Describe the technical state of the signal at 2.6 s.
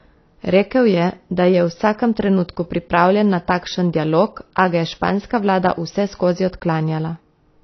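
AAC compression affects the speech at 2.6 s, as it does throughout the clip. Content above 6 kHz is missing, which points to a low-bitrate AAC-LC encode, around 24 kbps. The likely cause is a coarse spectral quantiser leaving gaps, which gives dull, smeared, fizzy sibilants.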